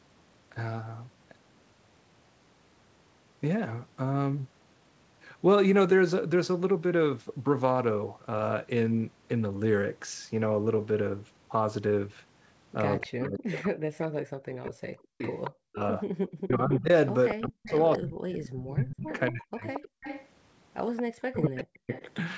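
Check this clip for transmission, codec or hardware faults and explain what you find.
Three faults appear in the second half of the clip, all tied to a speakerphone on one end of the call: returning echo, the talker's speech being pushed down while both sides talk, and brief dropouts in the room sound.

Echo leak: from 12.98 to 13.59 s, and again from 15.28 to 22.13 s, a second copy of the speech trails the original by 228 ms. It sits about 10 dB below the speech at first, then about 15 dB below. The likely cause is an echo canceller that failed to fully remove loudspeaker sound picked up by its microphone.

Speech suppressed in double talk: from 12.98 to 19.64 s, and from 21.01 to 21.9 s, the talker's speech repeatedly sinks or breaks up, by as much as about 40 dB. This adds up to roughly four seconds in the first stretch and about one in the second. The likely cause is the canceller turning down both voices when it couldn't separate local speech from echo.

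Background gated by the echo canceller: the room sound briefly ducks at 16.09–16.13 s (about 16 dB, 40 ms) and drops nearly out at 19.92–20.03 s (about 40 dB, 0.1 s). The canceller clamped the microphone while the loudspeaker played and released it moments later.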